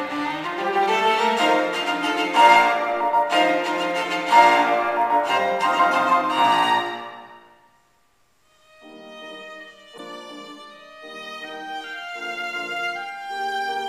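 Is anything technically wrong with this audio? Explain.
Yes. From 9.97 to 10.00 s the audio briefly breaks up and skips ahead, likely a broken MP3 bit reservoir. That 30 ms span fits about one 26 ms frame whose borrowed data was lost, so it decodes from the wrong bytes. A clean edit would splice without this short decoding disturbance.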